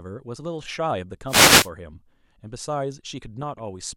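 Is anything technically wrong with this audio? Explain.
Yes, two separate faults affect this speech clip.

From 1.26 to 1.70 s there is a wireless microphone noise hit. The analogue FM radio link fades as reflected signal paths cancel at the receiver, so receiver noise rises and a brief swish of static washes over the speech.

From 3.42 to 3.63 s there is DAB burbling. Weak reception lets bit errors, at a rate around 0.3 percent, slip past error correction into the MP2 data across roughly ten frames. Wrong samples put short blips of noise into individual sub-bands over the speech.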